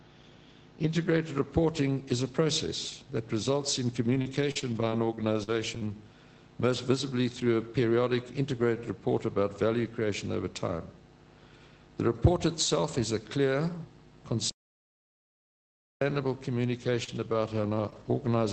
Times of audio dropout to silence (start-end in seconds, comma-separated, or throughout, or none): 14.50-16.01